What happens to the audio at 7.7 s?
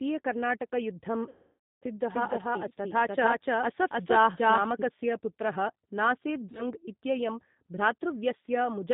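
At 7.7 s the speech carries the same G.729 codec coding that runs through the whole clip, and the damage is plainly audible. The codec rebuilds each 10 ms frame from a vocal-tract filter, a pitch predictor and a few pulses. That gives a rough, slightly synthetic tone, with a bandwidth and texture that fit an 8 kbit/s G.729A link. On a spectrogram, energy stops at a flat ceiling near 4 kHz. The harmonics look smeared and buzzy instead of clean.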